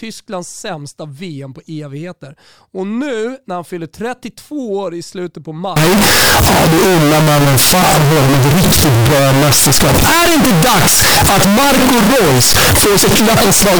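It's a speech clip, and at 5.76 s it suddenly turns into a brutal, near-square blast sitting at an almost fixed, high level, staying that way right to the end. Quiet background noise jumps up to match the speech, though you can still follow the pitch contour. That's the classic float read as integer sound: the data was likely 32-bit float samples being interpreted as 32-bit integers, so the sign and exponent bits dominate every sample's value.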